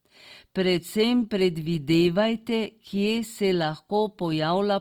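Throughout, the speech sounds grainy and rough, with noise filling thin upper bands. Likely Opus compression in music mode, which fits about 24 kbps.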